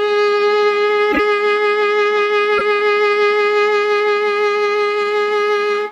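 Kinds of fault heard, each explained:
Corrupt frame decoded: damaged compressed frames were decoded anyway, misplacing energy in frequency. An error at 1.11–1.20 s spans a few frames, and one at 2.58–2.61 s covers about one. Each appears as a bright smeared block on the spectrogram and a waveform spike, with error peaks around -5 dBFS.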